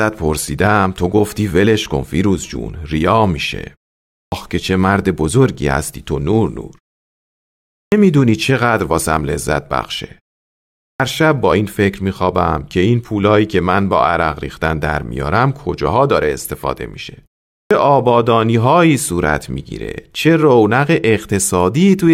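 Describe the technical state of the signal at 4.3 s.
At 4.3 s there is a clipped start after a pause: the output path dozed off during the preceding 0.53 s of silence and was still waking from 4.21 to 4.32 s. That swallows the first 111 ms of the returning speech, so it bursts in abruptly, missing its opening sounds.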